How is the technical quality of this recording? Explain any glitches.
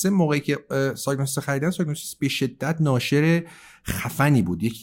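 No technical glitches can be heard in the recording. The speech carries on without any audible interruption or disturbance, so there is nothing to explain.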